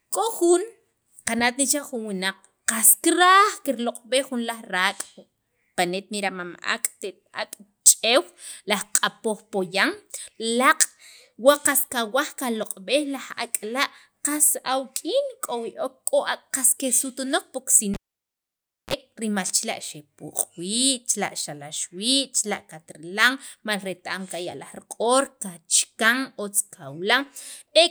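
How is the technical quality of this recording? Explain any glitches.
The recording has one clear glitch, between 17.94 and 18.94 s. A pop drops the sound to near silence for about 0.95 s, then a 32 ms burst of 60 Hz buzz and a second pop bring it back. That's a cable pulled and plugged in. The live connector loses contact, and its tip briefly touches alone, picking up mains hum before it fully seats.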